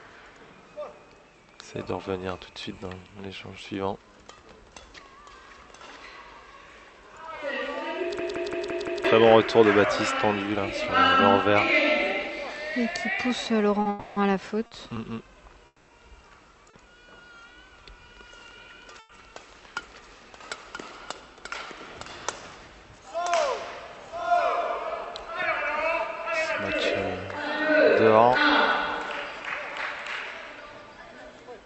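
The audio passes through an Opus call path whose band stops at 8 kHz, with a coding rate that points to about 64 kbps. From 8.19 to 9.05 s there is a system hang loop. A single 170.67 ms slice repeats five times, giving a stutter at about 5.9 Hz. This fits an 8192-sample ring buffer replaying while the host was stalled, and roughly a second of audio is lost. Between 13.81 and 14.98 s come repeated stalls (stutter). The jitter buffer ran dry three times, and the receiver filled 100 ms in total, with no gap longer than 50 ms. Nothing is missing, but the sound drags. Within that span, 13.89 to 14.18 s is a call audio freeze: the last sound is held as a fading 270 ms extension, likely from packets delayed in transit, and the timeline shifts by the same amount. Similar freezes follow at 15.66 to 15.90 s, with 220 ms filled including about 20 ms of silence, and at 18.99 to 19.11 s, with 100 ms filled. 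At 16.70 to 16.75 s a short stall from a late packet stretches the sound by 30 ms, adding a slight buzz or dip, before it resumes where it stopped. From 21.08 to 21.73 s a jitter buffer speed-up plays the audio at 110 % speed at unchanged pitch. The receiver cuts pitch-period slices totalling around 70 ms to drain the excess delay, so the passage sounds hurried.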